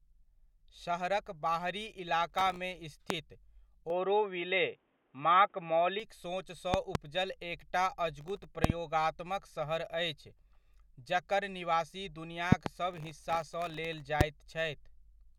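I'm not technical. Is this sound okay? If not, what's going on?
No, the speech has three kinds of fault.

Processor overload crackle occurs from 2.30 to 2.57 s, 8.21 to 8.44 s and, longest, 12.91 to 14.01 s. The computer couldn't keep up, so many tiny slices of audio, each far shorter than a blink, arrived late and were filled with scraps of older sound. You hear a gritty tearing laid over the speech. Unlike a pop, it is a rough stretch lasting a fraction of a second or longer, not one sharp hit.

A loud pop occurs as a single pop at 3.10 s and another at 14.21 s, with quick pairs at 6.74 to 6.97 s, 8.64 to 8.72 s and 12.52 to 12.69 s. Each is a sudden jolt of electricity in the signal, likely from a plug, switch, static or a driver hiccup. It sounds like a sharp, much louder snap on top of the speech, which carries on underneath. What sets it apart from crackle is that it is a clean, isolated click or double click, not a gritty run.

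Input switched to a poorer device occurs from 3.90 to 6.00 s, with no gap at the change. The speech turns dull and boxy, loses its crisp top end above about 3.8 kHz, shifts in loudness and gains a faint new background hiss. That points to the recording likely having jumped to another microphone or a headset's call mode and then back. Unlike the pops and crackle, nothing is added on top. The whole tone changes for two seconds.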